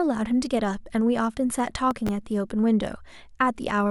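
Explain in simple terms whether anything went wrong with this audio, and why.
Between 1.91 and 2.09 s the speech picks up a short burst of gritty crackle, a processor overload crackle. The computer handling the audio fell behind and missed several deadlines in a row for its very short buffers, each only a millisecond or two long. Every time it missed one, a scrap of old audio was played again with hard edges. Those repeated fragments add up to a tearing sound that stops once the processor catches up.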